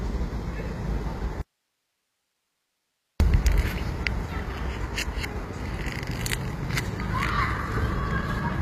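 Throughout the recording, the treble has the synthetic, gritty sheen of HE-AAC compression, likely at a low bitrate in the region of 24 kbps. The upper band sounds bright but is rebuilt from copied lower bands rather than carried intact, so its detail doesn't lock to the fundamentals, and nothing comes through above 15.5 kHz. Unlike plain low-pass filtering, which leaves a dull top end, this keeps the treble present but metallic and smeared.

From 1.41 to 3.20 s, roughly 1.8 s of the sound vanishes in an audio dropout to a faint residue, likely a break in the signal feed while the downstream path stayed open. The gap is not silent: steady hiss sits roughly 50 dB below the normal level. Both edges are abrupt, which sets it apart from a fade or a natural pause, and the remaining hiss separates it from a hard mute to digital silence.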